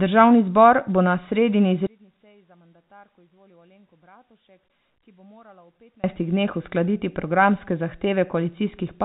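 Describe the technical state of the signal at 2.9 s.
At 2.9 s the speech falls by about 34 dB and turns faint. This lasts from 1.87 s to 6.04 s. The likely cause is one channel inverted, meaning one stereo channel has reversed polarity. When the two channels are summed to mono, everything they share cancels. Centred speech nearly disappears. Only the small difference between the channels survives, heard as a weak copy. The band limit of the G.711 telephone coding can still be heard in it.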